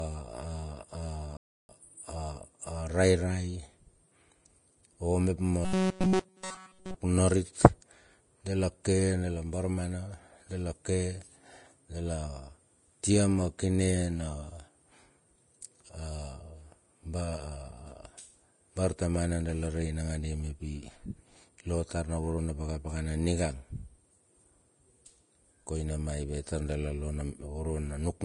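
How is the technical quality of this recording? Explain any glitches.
The recording has three audible faults: coding damage throughout, a brief dropout near the start and a stretch of buzzing distortion.

Vorbis compression: the whole clip sounds hissy and grainy, with the treble cut off early. A spectrogram shows a lowered ceiling and smeared, noisy treble. This likely comes from low-rate Vorbis coding, around 31 kbps.

Playback stall: from 1.37 to 1.69 s the speech stops dead for about 320 ms, then resumes. The waveform shows a flat silent gap. This was likely the player running out of data.

Robotic sound from repeated short buffers: from 5.65 to 6.95 s the speech becomes a rigid metallic buzz at 188 Hz. The spectrogram shows evenly spaced harmonic lines. This likely comes from a roughly 5 ms chunk looping throughout.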